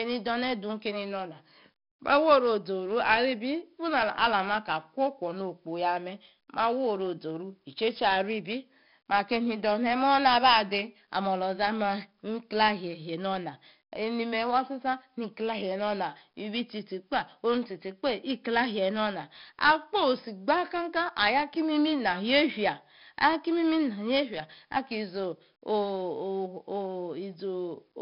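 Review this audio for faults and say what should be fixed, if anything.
4-bit ADPCM compression runs through the whole recording. Every loud syllable carries a gritty hiss that rises and falls with the speech, because each sample is stored only as a coarse 4-bit step from a prediction. Sharp consonant onsets sound distorted where the step size lags behind the attack. The damage is heavy, and nothing sounds above 5.3 kHz, which points to roughly 44 kbps at a low sample rate. On a spectrogram, broadband noise fills the bands beneath each loud passage, and energy stops abruptly at 5.3 kHz. Keep the original as uncompressed PCM at a full sample rate, or use a modern codec at adequate bitrate, instead of 4-bit ADPCM.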